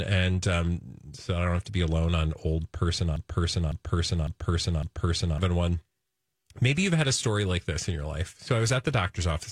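A stalled player or stream likely kept resending one fragment: a broken-record loop, 3.16 to 5.38 s, repeats a 0.55 s piece four times.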